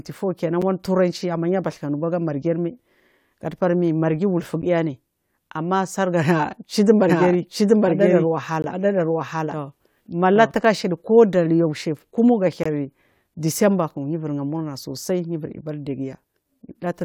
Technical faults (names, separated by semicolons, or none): gap between stream segments; doubled audio track